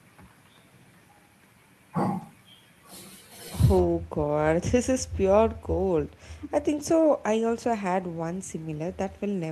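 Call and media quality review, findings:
Lost packets rebuilt from error correction at 2.21–2.23 s, 3.77–3.83 s and 6.79–6.81 s. Brief rough, noisier patches in the speech but no gaps. The first and last fit one lost 20 ms packet each, the middle one about two separate ones. Opus in-band FEC on the receive side: the next packet's low-bitrate copy got decoded in place of the missing frame, hence the coarser texture there.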